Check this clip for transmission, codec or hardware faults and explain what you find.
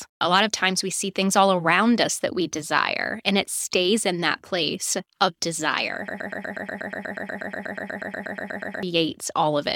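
One transmission fault is present.

From 6.08 s to 8.83 s, just after "that place of desire", there is a broken-record loop: a 0.12 s fragment repeats back to back 23 times, giving a rapid mechanical stutter. The likely cause is a stalled player or stream re-sending its last held fragment, so the speech meant for that span is lost.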